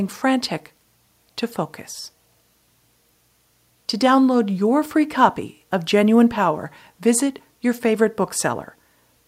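No technical faults can be heard anywhere in the recording.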